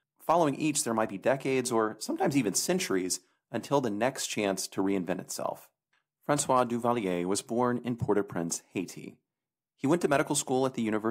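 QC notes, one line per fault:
Nothing to flag here; the speech comes through with no faults to note.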